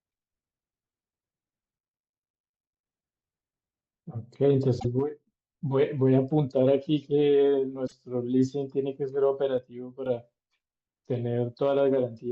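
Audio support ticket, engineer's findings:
Damaged data in the compressed stream at 4.77–4.85 s and 7.84–7.93 s: short glitches in the speech. The decoder is misreading corrupt frames and resyncing on the next header. This is a decoding glitch, not a clean level change.

One channel dropping out at 5.00–5.27 s and 9.58–10.06 s: the speech dips abruptly by about 6 dB, then recovers, with no chirp and no timing jump. Likely cause is loss of one stereo channel before the mono sum, halving the shared content.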